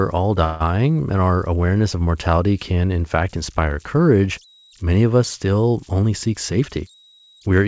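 It's a speech recording that came through a G.722-style call path, which fits 64 kbps, with nothing above 8 kHz. Converter idle tones run underneath the whole way: a tone around 4 kHz, about 32 dB below the speech, from an undithered delta-sigma converter cycling on quiet input. From 0.44 to 0.63 s there's a call audio freeze, most likely from late packets draining the jitter buffer. The last sound is stretched into a fading tail for about 160 ms, then "and our awareness of" carries on late with nothing lost. After "many of us still", from 5.94 to 7.41 s, a jitter buffer speed-up trims pitch periods to shed about 150 ms, so the speech runs hurried at 111% speed with the pitch unchanged.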